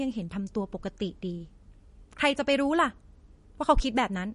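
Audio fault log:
Throughout: MP3 compression, plainly audible. Nothing reaches above 10.6 kHz, and below that edge the speech has a watery, swirling texture, with metallic chirps on s sounds and smeared consonant attacks. The likely cause is an MP3 encoder starved of bits, which fits a bitrate around 40 kbps. It cuts the treble at a fixed point and drops weak frequency lines that flicker on and off between frames. A plain low-pass filter would dull the top without the swirl or chirps.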